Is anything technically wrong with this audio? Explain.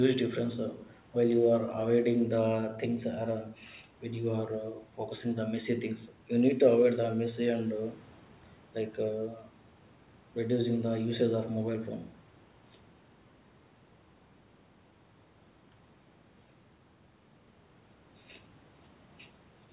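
No, nothing technically wrong can be heard here.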